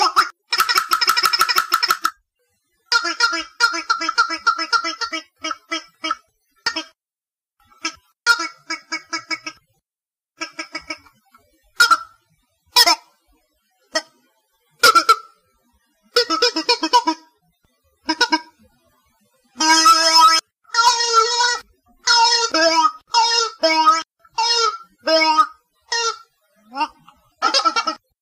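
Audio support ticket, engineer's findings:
No faults found on playback.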